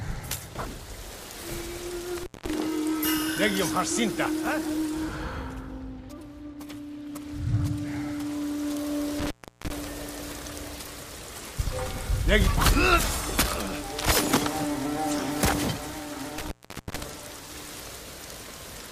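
At 2.18, 9.19 and 16.38 s an intermittent contact opens for about 0.20, 0.35 and 0.44 s, cutting the sound with crackle at each edge and leaving faint hiss. The waveform shows near-flat gaps bracketed by spikes, and the spectrogram shows broadband vertical streaks.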